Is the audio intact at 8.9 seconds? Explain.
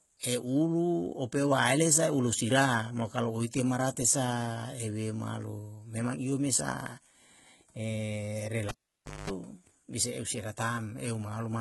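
No. A pop at 8.68 s cuts the sound to near silence, then 50 Hz mains buzz lasts about 0.21 s before a second pop restores it at 9.30 s: a cable pulled and plugged in, with the live lead out for about 0.56 s. The speech is also gritty and lispy on s sounds with nothing above 11.8 kHz, likely from heavy HE-AAC compression, where synthetic treble is copied up from lower bands at a very low bitrate, fitting about 16 kbps.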